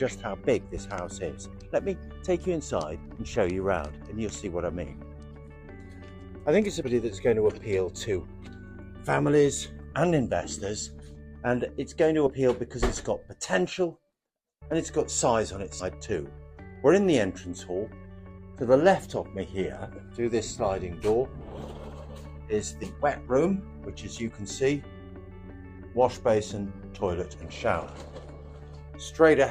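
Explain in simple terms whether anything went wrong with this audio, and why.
Compressed frames skipped: chunks of the encoded file, each 10 ms long, went missing or were rejected as damaged. Playback jumps ahead by a short stretch, up to about a third of a second, at 3.15, 6.84, 9.92, 11.15, 12.26, 15.79, 22.83 and 27.34 s.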